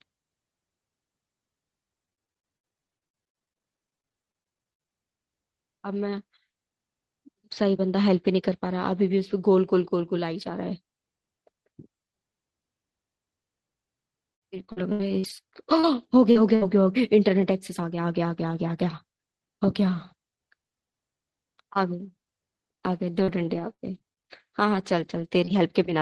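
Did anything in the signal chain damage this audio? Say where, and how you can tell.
Yes, at the network stage of the call: repeated packet loss (robotic sound) in three stretches, 2.05 to 4.89 s, 14.33 to 16.63 s and 23.19 to 25.55 s. The first is worst, with about 41% of it concealed, falling to 18% and then 8%. Holes up to 76 ms are patched by stretching the last sound, which gives a choppy texture with pieces missing. Concealment fills the holes, so there is no true silence or click as a buffer underrun would leave.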